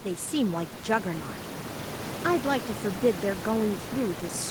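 No technical faults can be heard in this recording.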